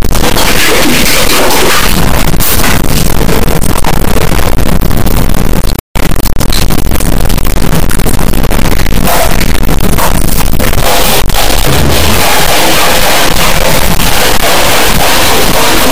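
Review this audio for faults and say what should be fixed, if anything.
The whole clip suffers from an integer read as float fault: samples stored as 32-bit integers are being read as 32-bit floats. Each integer bit pattern becomes a float that is either tiny, invalid, or enormously beyond full scale, so the output slams between zero and the clipping limit. The result is an extremely loud, harsh, buzzing square-wave texture in place of the intended sound, collapsing to silence wherever the source is very quiet. To prevent it, carry the sample format explicitly in the file header or stream metadata and have the reader check it, converting 32-bit integer to float by scaling rather than reinterpreting the raw bits.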